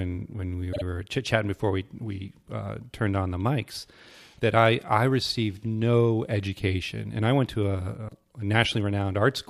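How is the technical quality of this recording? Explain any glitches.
One glitch stands out. Between 0.72 and 0.82 s, after "when we" and before "were chit chatting before", repeated frames replay a 52 ms block twice, a length that fits a pair of compressed frames. This is heard as a brief stutter and adds about 0.1 s.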